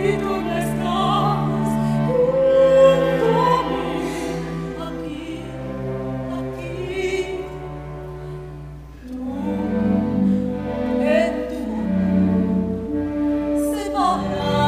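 Channel delay (doubling) runs through the whole recording: one channel trails the other by about 46.4 ms, consistent with a 2048-sample buffer, so the mono sum carries an equal-level slap copy.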